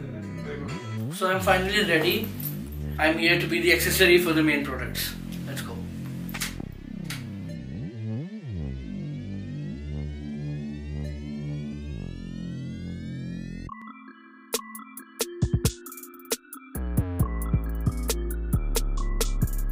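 The recording software likely failed to read its input buffers before the hardware overwrote them, a dropped buffer (overrun), so short stretches vanish and the audio joins straight across. At 11.73 s about 20 ms is lost, and at 13.82 s about 50 ms, each heard as an abrupt skip forward.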